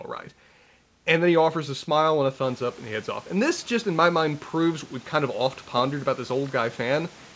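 No faults to report: the room's background noise steps up by about 12 dB around 2.5 s but stays roughly 29 dB under the speech, and the band stops at 8 kHz, which fits a wideband G.722 call path.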